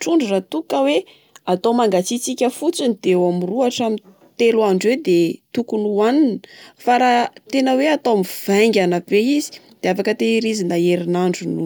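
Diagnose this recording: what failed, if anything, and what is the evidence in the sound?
Nothing in this speech recording points to a failure anywhere along the chain, so there's honestly nothing to diagnose here.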